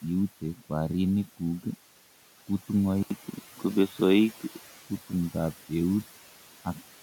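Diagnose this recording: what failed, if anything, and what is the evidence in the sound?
Call processing shows noise suppressor artifacts throughout. The room noise, sitting about 19 dB below the speech, is pulled down by about 11 dB between phrases and swells back under them. On a spectrogram the background flickers frame by frame.

At the input stage, the sound turns dull from 3.03 to 4.86 s, most likely because the input switched to a poorer device. An 80 ms gap marks the switch. The spectrogram shows a narrower band there, with a modest level step and a different, quieter noise floor.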